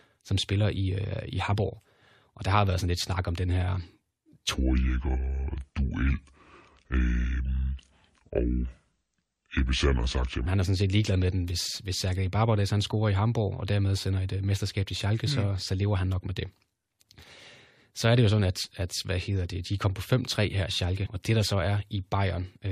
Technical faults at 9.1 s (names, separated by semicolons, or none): section at the wrong speed